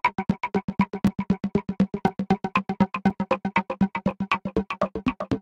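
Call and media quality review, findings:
Gap between stream segments at 1.07 s: hard-edged dropout of about 5 ms, silence inserted, no sound content missing. The timestamp discontinuity at a segment join leaves a hole that the player pads with silence.

Gap between stream segments at 3.1 s: same hard-edged hole, about 5 ms. Position fits a join between 1 s segments. The packager or segmenter is the probable component.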